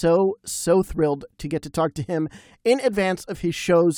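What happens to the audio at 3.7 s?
Nothing goes wrong at 3.7 s; the speech carries on intact through that moment with no dropout, click or distortion.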